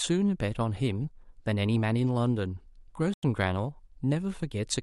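At 3.08 s the speech drops abruptly into silence for about 0.15 s, resuming at 3.23 s with timing intact. This is a corrupt frame muted: damaged compressed data was rejected by the decoder, and the player filled the gap, which fits two frames, with silence.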